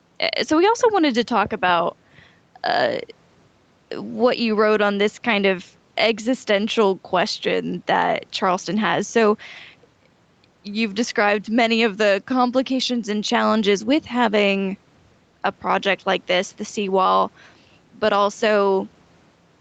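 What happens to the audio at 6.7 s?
At 6.7 s, as throughout, the gain is pulled down by roughly 5 dB on loud sounds, squashing loud and soft parts closer in level: gain pumping, likely excessive gain driving a fast limiter.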